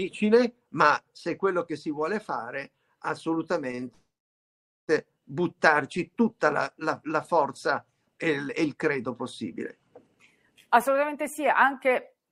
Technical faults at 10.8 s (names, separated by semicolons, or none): jitter buffer speed-up